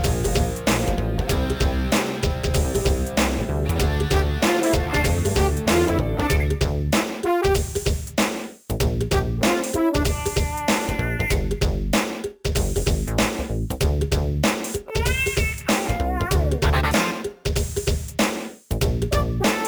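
Throughout, the audio shows crude rate conversion: samples were repeated with no filtering, which fits a step from 32 kHz to 44.1 kHz. The error sits roughly 20 dB under the signal as an inharmonic fizz that follows loud, bright moments. Unlike clipping, it doesn't depend on peaks.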